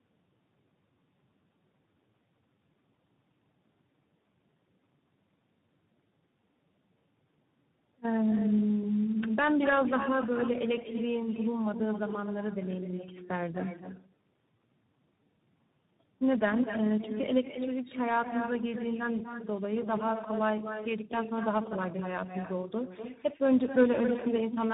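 From start to finish, every phrase is followed by a quieter copy of itself. This is echo with no canceller. The far end appears to be playing the call over a loudspeaker. Its microphone picks that sound up again and sends it back, and nothing removes it. The copy arrives roughly a fifth of a second later, at about 9 dB below the original. It sounds thinner, like a shadow trailing each phrase.

Tandem speech coding runs through the whole clip as well. The sound is rough, muffled and warbly, and nothing is present above 3.8 kHz. That fits a call passed through three speech coders in a row, with the audio decoded and re-encoded at each link. Every coder has to work on the errors left by the one before, so the damage piles up. The result sounds worse than any single coder would.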